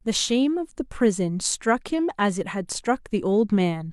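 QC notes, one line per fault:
No fault was heard anywhere in the speech. Nothing in the clip needs a line of its own.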